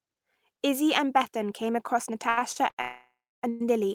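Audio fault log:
2.29–2.79 s, repeated stalls (stutter): Just after "came across", the sound catches four times. About 218 ms of filler is inserted over this half second, close to half the span. The longest hold lasts 86 ms. Each time, the last fragment is stretched out until fresh audio arrives, then playback resumes where it left off. Nothing is lost. The stutter comes from the jitter buffer repeatedly running dry as packets arrive late.
2.81–3.44 s and 3.49–3.61 s, call audio freeze: The sound halts twice and then picks up exactly where it stopped, so nothing is missing. The first freeze fills 619 ms. The held sound decays, and the last 300 ms is silence. The second freeze is brief, at 112 ms, and never reaches silence. Each freeze pushes the rest of the audio later by its own length. The likely cause is packets stalled in transit, which empties the jitter buffer.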